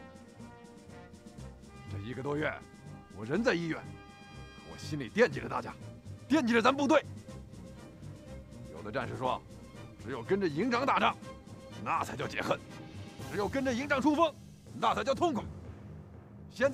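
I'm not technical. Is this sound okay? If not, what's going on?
Yes, this sound is okay, and nothing is going wrong in it.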